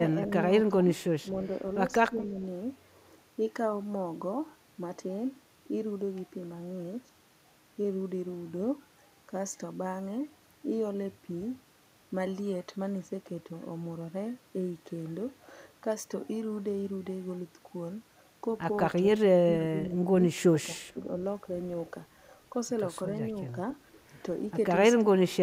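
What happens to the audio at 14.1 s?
Nothing goes wrong at 14.1 s; the speech carries on intact through that moment, with no dropout, click or distortion.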